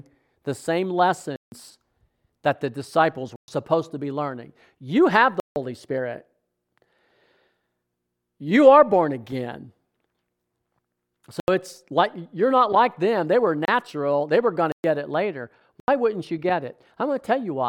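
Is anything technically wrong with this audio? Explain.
Yes. The speech drops out seven times in blocks of digital silence: 1.36 to 1.52 s (160 ms, just after "the same"), 3.36 to 3.48 s (120 ms), 5.40 to 5.56 s (160 ms), 11.40 to 11.48 s (80 ms, just before "it's like you're not"), 13.65 to 13.68 s (27 ms, just before "they were going"), 14.72 to 14.84 s (120 ms) and 15.80 to 15.88 s (80 ms). In each gap the samples have been replaced by zeros, most likely because the output buffer was not filled in time. The signal stops and restarts without any fade. The gaps sound like short holes in the speech, the 27 ms one the briefest.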